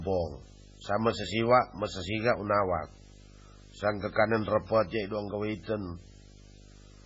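From start to finish, a video or display buzz sits under the speech: a coarse 50 Hz buzz at the picture's field rate, with hash riding above it and a thin, very high whistle at 15.6 kHz from the line scan. A screen or video cable is coupling its scanning signals into the audio path. The buzz is fairly prominent, roughly 15 dB below the speech, so it stays audible through pauses and under quieter syllables.

Also present for the whole clip, the speech has nothing above 7.6 kHz, giving a dull, band-limited top end. The sound is heavily watery and swirly, with s sounds turning metallic and chirpy and consonant attacks smeared. This is likely MP3 compression at a very low bitrate, consistent with around 16 kbps. Short of bits, the encoder drops the treble at a fixed cut-off and zeroes weaker frequency lines, which flicker on and off between frames.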